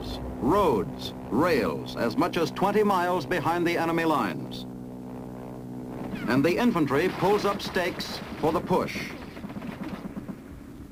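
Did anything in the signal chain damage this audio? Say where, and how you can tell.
Yes. The damage happened at the converter, where sample clock jitter runs through the whole clip. A roughness rides on the audio and grows with loud, bright passages, then disappears whenever the sound drops away. An unsteady sampling clock, wandering by something like 10 microseconds, takes each sample slightly early or late, so steep waveform slopes produce the largest errors, about 25 dB below the signal. A steady analogue hiss would persist through the quiet gaps.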